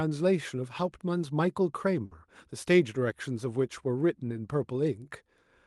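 At 2.05 s the speech briefly freezes into a held, fading sound for about 60 ms, then jumps ahead to 2.14 s with a short stretch missing. This is a burst of packet loss on the call path, with the receiver stretching the last sound to cover the gap.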